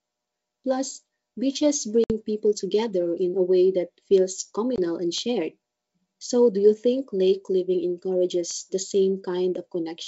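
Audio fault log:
2.04 to 2.12 s and 4.76 to 4.79 s, packet loss on an ADPCM call: hard-edged silent gaps of 60 ms and 20 ms, about three packets and one. Speech then resumes distorted until the decoder's predictor and step size resynchronise.
4.18, 5.18, 8.51 and 9.55 s, bit error spike: single sharp broadband ticks, unrelated to the speech, where flipped bits throw one to three samples off by a power of two.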